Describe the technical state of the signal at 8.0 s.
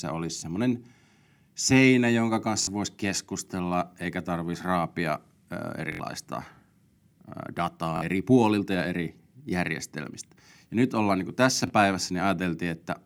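At 8.0 s the wireless link dropped data: a Bluetooth stutter from 7.97 to 8.02 s, where about 46 ms of audio, fitting roughly two lost packets, never arrived. The receiver replayed its last buffered slice, giving a brief buzzing stutter before speech resumes at "eri puolilta ja eri".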